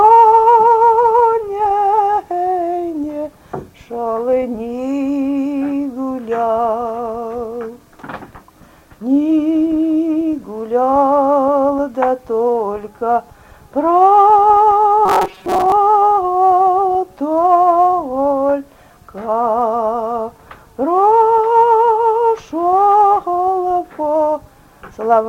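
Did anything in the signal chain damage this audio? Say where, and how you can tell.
Yes: robotic sound from repeated short buffers, from 15.06 to 15.73 s, most likely at the driver or buffer stage. Roughly half the audio is a repeated slice, imposing a rigid 188 Hz buzz, which fits a roughly 5.3 ms buffer. Dropouts would leave gaps or clicks instead.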